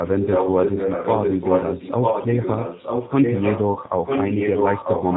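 The whole recording passed through the G.729 codec at 8 kbit/s, which rebuilds speech from a vocal-tract filter and a few pulses per frame rather than the waveform itself. The result is band-limited below 4 kHz, plainly rough and slightly synthetic throughout.

From 0.02 to 3.62 s an echo leak runs alongside the speech: a copy arrives about 945 ms late, roughly as loud as the original. This likely comes from a far-end loudspeaker whose echo canceller failed to remove what its microphone picked up.

Between 3.74 and 3.79 s, VoIP packet loss concealed by the speech codec covers a single 20 ms packet. The decoder extrapolates from its last pitch and filter state, so the sound smears into a brief buzzy tone or coloured noise that fades, and stays weak or distorted for tens of milliseconds or more afterwards.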